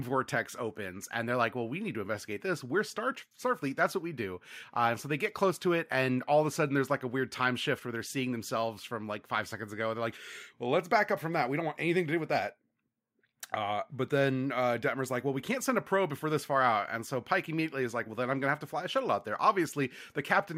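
Speech recording, no technical faults audible at any point.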